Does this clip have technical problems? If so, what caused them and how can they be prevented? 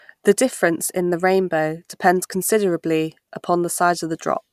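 No, there are no technical problems to report in this speech clip. With nothing gone wrong, there is no cause to trace and nothing to prevent.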